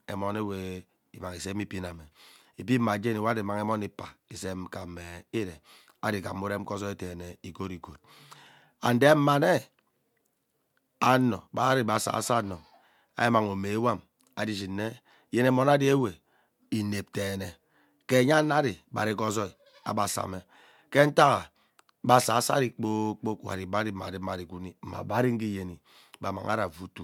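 No technical faults can be heard anywhere in the speech recording. Nothing in the audio breaks, drops out or changes unexpectedly at any point.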